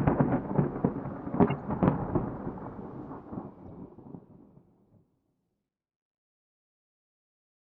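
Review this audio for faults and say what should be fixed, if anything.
Corrupt frames were decoded at two points in this everyday-sound recording, at 1.47 to 1.51 s and at 3.68 to 3.70 s. Damaged bits in the compressed data were played as though valid, so misread gains and codes put energy at unrelated frequencies. The first is a short noisy squeak peaking near about -20 dBFS, spanning what sounds like several frames. The second is a fainter blip, around -35 dBFS, over perhaps a couple of frames. A dropout would leave a gap or a smeared repeat. These add foreign content instead. Prevent this with checksums or CRC on each frame, so that damaged frames are discarded and concealed rather than decoded.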